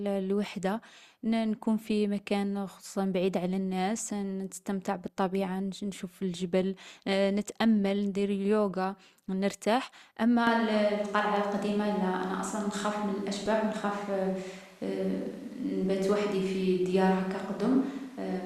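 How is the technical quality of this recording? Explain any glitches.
Quality drops partway through, with two separate glitches.

From 10.47 s to the end, the speech turns roomy and hollow with thinner bass, most likely a switch to a distant microphone after the close one dropped out. Level stays about the same, but the room noise rises to roughly 30 dB below the speech. A spectrogram shows weaker low frequencies and smeared reverberant tails.

At 13.46 s there is a brief glitch from damaged data in a compressed stream. Corrupted bytes made the decoder misread the frames and resynchronise at the next header. The waveform shows a tiny discontinuity, and the spectrogram shows a thin broadband vertical streak.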